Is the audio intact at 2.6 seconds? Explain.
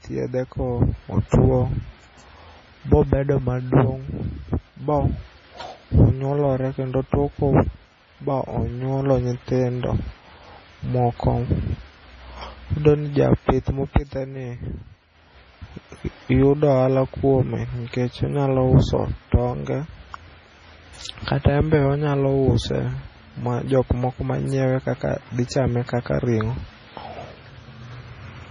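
No. Heavy damage runs throughout the speech, likely from MP3 compression at a bitrate near 24 kbps. The encoder removes everything above 10.5 kHz and starves weak frequency lines, so the speech turns watery and swirly, with metallic chirps on s sounds. A spectrogram shows a hard ceiling and flickering gaps below it.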